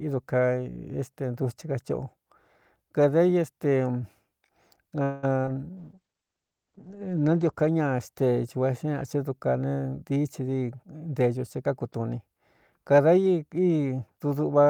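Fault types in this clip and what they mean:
Call audio freeze: From 5.03 to 5.25 s the sound stops moving forward and the last moment is stretched into a buzzy hold that fades for about 195 ms, without dropping to silence. Then the speech resumes exactly where it left off, so nothing is lost, only delayed by that much. The likely cause is packets stalling in transit, leaving the receiver's jitter buffer empty until they arrive.
Short concealed packet loss: Just after the freeze, two brief back-to-back glitches at 5.41 to 5.45 s and 5.45 to 5.49 s give a quick smear or wobble in the speech, about 40 ms in total. Each covers roughly 20 ms of audio that never reached the decoder in time. The receiver patched each hole by extrapolating from the preceding sound before blending back into the real signal.
Call bitrate drop: From 5.79 to 8.33 s the speech turns coarse and muffled, with the top end cut back from about 20 kHz to about 8 kHz, at its worst for about 1.2 s. 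The bandwidth estimate for the call fell, so the Opus encoder went from 32 kbps to 9 kbps. At that rate it quantises more roughly and drops high frequencies until the rate recovers.
Jitter buffer speed-up: Between 10.04 and 11.3 s the speech runs at about 111% of normal speed, sounding hurried while the pitch stays unchanged. The jitter buffer was holding more audio than its target, so the receiver trimmed out small pitch-period slices repeatedly, around 150 ms altogether. This pulls the delay back down without shifting the pitch.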